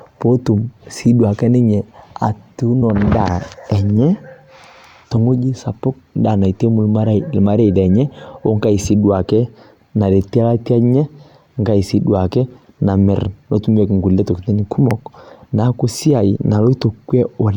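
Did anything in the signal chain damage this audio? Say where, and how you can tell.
Yes, at the codec or storage stage: compressed frames skipped at 2.81 s, 5.16 s and 16.35 to 16.37 s. The sound jumps ahead by a couple of 23.2 ms frames, about 50 ms, twice, then roughly five frames, around 100 ms.

There's also a loud pop at 14.91 to 14.93 s, peaking about 10 dB over the sound, and another at 16.82 to 16.84 s, about 5 dB over. Each is a single sharp thump with the sound carrying on underneath, likely a voltage spike in the analogue wiring.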